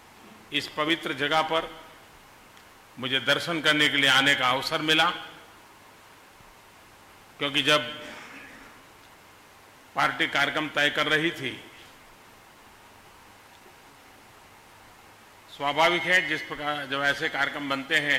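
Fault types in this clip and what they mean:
Nothing here to flag: the audio runs along without any dropouts, glitches or other technical trouble worth noting.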